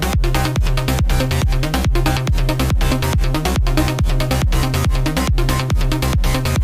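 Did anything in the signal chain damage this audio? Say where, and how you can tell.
No, nothing along the way seems to have harmed these sounds, and I can't hear anything that points to a problem at any stage.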